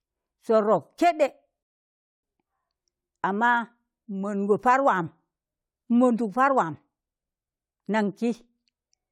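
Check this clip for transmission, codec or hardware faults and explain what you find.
There's one transmission fault. At 1.63 to 2.23 s there's a rebuffering stall: the player ran dry, so the speech drops to silence for about 0.6 s, then picks up exactly where it stopped, with nothing skipped.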